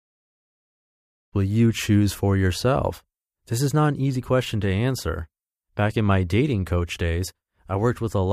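No faults found in this speech; the gentle fade-in over the opening second or so is a deliberate edit with no click or hard edge.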